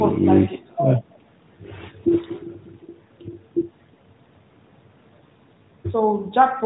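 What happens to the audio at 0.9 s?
At 0.9 s the speech carries on intact, with no fault at that moment.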